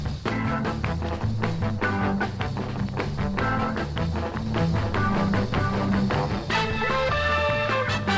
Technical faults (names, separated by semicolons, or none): doubled audio track